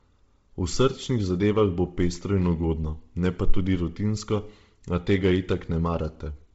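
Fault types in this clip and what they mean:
Bluetooth LC3 compression: the speech stops at about 7.7 kHz, and its upper band turns heavily breathy and grainy, likely LC3 coding at a rate fitting 24 kbps. Unlike a plain low-pass filter, which only dulls, this leaves a hissy, noise-filled upper band.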